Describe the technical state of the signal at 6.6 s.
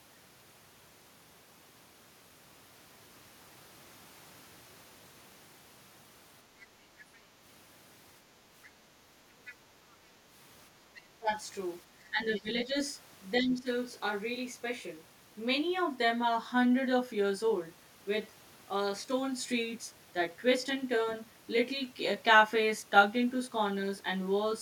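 At 6.6 s, a brief scrap of the other side's voice leaking through is audible. It lasts from 6.6 to 6.65 s. It sits roughly 25 dB below the main speech, so it is faint and clipped short. The likely cause is a device playing the far end on a loudspeaker. The echo canceller did not fully remove it from the microphone. What escapes is a fragment laid under the talker.

The same moment also carries the channel delay (comb filtering) that runs through the whole clip. One channel lags the other by around 20 ms. When the two are summed to mono, shared content cancels at evenly spaced frequencies. The first notch falls near 30 Hz, and the rest repeat upward in a regular series. The result is a rough, slightly doubled colouring that stays fixed on the speech.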